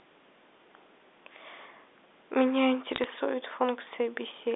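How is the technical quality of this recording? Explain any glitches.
The recording comes over a narrowband telephone line limited to roughly 250 Hz to 3.6 kHz, consistent with G.711 A-law coding, and has one brief glitch. Bit errors on a digital phone line occur from 2.91 to 3.04 s. Around half a percent of bits flip, each corrupting a single sample and producing sharp ticks and crackle over intact speech.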